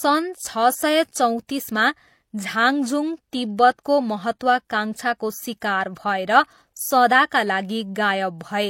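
Throughout, the speech has layered, smeary artefacts and nothing above 16.3 kHz, likely transcoding between lossy codecs, fitting an MP3 pass followed by low-bitrate HE-AAC.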